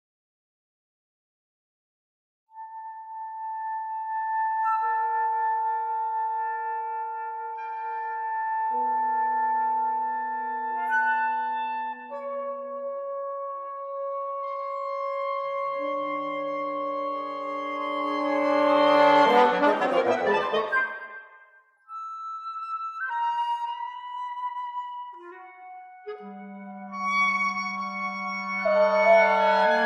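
From start to finish the audio carries a steady 25 Hz tick, the sign of a resampler restarted on every block. The 48 kHz to 44.1 kHz conversion was run on each 40 ms block in isolation, so the filter lacked real neighbouring samples at every edge and left a small error there. On a waveform, slight discontinuities repeat every 40 ms; a spectrogram shows faint vertical lines at that spacing, only where signal is present.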